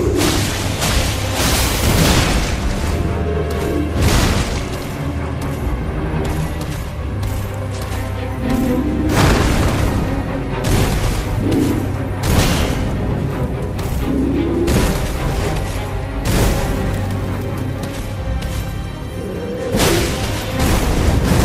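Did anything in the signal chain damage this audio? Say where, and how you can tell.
No, nothing in the signal chain has left audible damage on this audio. I can't point to any stage, from capture through to playback, where the sound has been altered by the equipment or the path it travelled.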